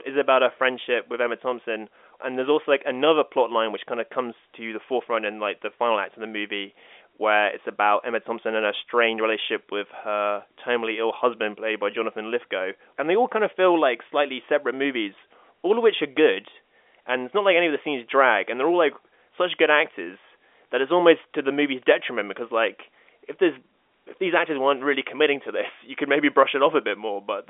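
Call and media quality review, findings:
No faults found in the speech; the G.711 telephone coding path carries it within the usual 300 Hz to 3.5 kHz line band.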